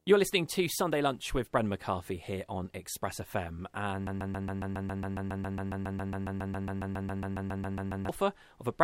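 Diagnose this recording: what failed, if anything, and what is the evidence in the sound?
The speech breaks into a broken-record loop from 4.07 s to 8.09 s: a 137 ms fragment repeats exactly, back to back, 29 times. The likely cause is a stalled player or stream buffer re-sending its last held block, so the intervening audio is lost.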